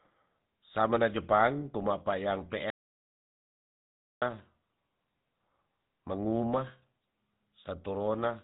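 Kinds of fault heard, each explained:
GSM full-rate codec: The speech has a buzzy, gravelly roughness throughout, with nothing above about 3.8 kHz. This comes from a codec that models the vocal tract and excites it with sparse regular pulses, a sound that fits GSM full rate at 13 kbps.
Audio dropout to silence: Just after "samena jepang kuma payang", the speech cuts off at 2.70 s and returns at 4.22 s, leaving about 1.5 s of total silence with no room tone. The input was likely lost while recording continued writing silence.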